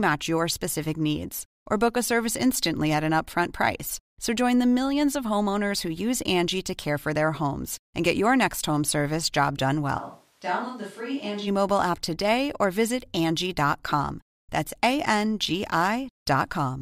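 Speech, and from 10.00 to 11.46 s it suddenly goes roomy and thin, drops about 10 dB, and picks up more room noise, roughly 35 dB under the voice, before snapping back. That's most likely a switch to a distant microphone while the close mic dropped out.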